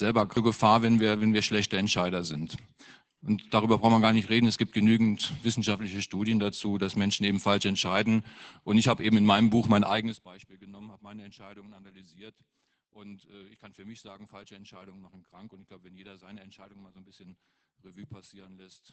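From start to finish, the speech carries Opus voice compression. The band stops near 8 kHz, so it sounds muffled. The coarse SILK excitation adds hoarseness and a slight robotic edge, which fits a bitrate around 12 kbps.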